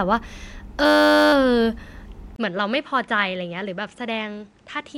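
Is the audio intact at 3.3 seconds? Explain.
No. At 3.3 s you're inside a stretch from 2.36 s to the end where the input has likely switched to a poorer device. After a 20 ms gap, everything above 10.5 kHz is gone, the level drops by roughly 10 dB, and a new noise floor sits around 35 dB down.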